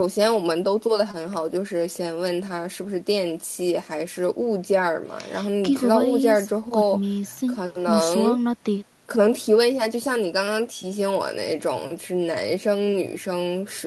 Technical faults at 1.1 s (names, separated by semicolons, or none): short concealed packet loss